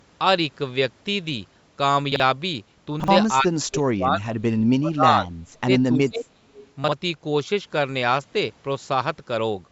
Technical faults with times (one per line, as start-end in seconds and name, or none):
2.12-2.20 chunks out of order
3.00-3.08 chunks out of order
3.40-4.51 speech suppressed in double talk
4.79-5.31 speech suppressed in double talk
5.64-6.51 speech suppressed in double talk
6.54-6.71 echo leak
6.84-6.92 chunks out of order